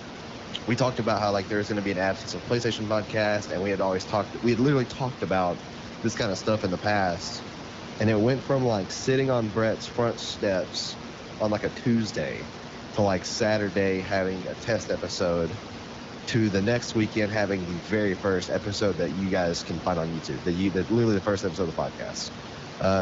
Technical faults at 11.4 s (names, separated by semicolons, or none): none